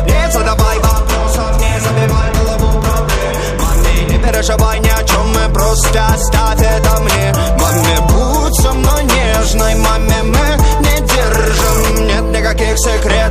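No technical faults can be heard anywhere in the clip.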